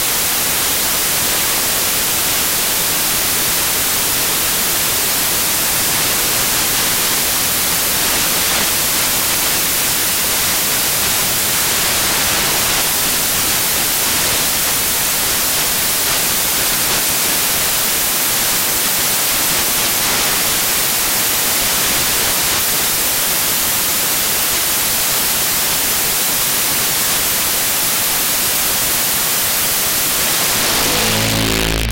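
From the first moment to the end, the audio suffers from samples built from the wrong bytes: the reader misassembles each sample's bytes, so the rapidly changing low-order bits become the dominant part of every value. The result is loud, harsh broadband noise, close to white on loud sounds.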